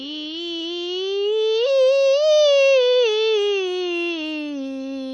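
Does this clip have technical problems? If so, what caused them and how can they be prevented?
Yes. WMA compression runs throughout the clip: the music rings and sounds washy, with a hiss that breathes with the signal and nothing above 10 kHz. The likely cause is a transform encoder smearing quantisation noise over long blocks and zeroing weak detail, which fits a bitrate near 32 kbps. To prevent it, encode at a much higher bitrate, use a more modern codec, or keep a lossless master.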